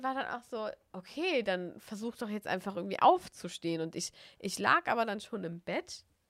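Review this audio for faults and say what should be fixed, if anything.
Nothing stood out on listening to this speech, so there is nothing here that needs fixing.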